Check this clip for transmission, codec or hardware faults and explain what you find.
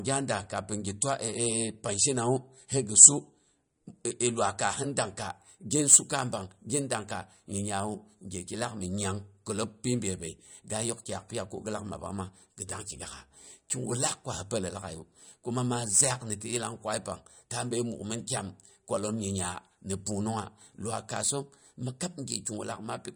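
Two faults are present: lossy coding damage across the whole recording, and a timing-related roughness that joins it partway through.

From start to finish the speech sounds watery and swirly, with chirpy, metallic edges on s sounds and nothing above 10.6 kHz. This is likely MP3 compression at a low bitrate, perhaps around 47 kbps, cutting the treble and letting weak frequency lines flicker between frames.

From 5.21 s to the end a grainy hiss rides on the speech, strongest on loud and bright passages and gone in pauses. This is sample clock jitter: a converter clock wandering by a microsecond or two shifts each sample's timing, producing error about 25 dB below the speech.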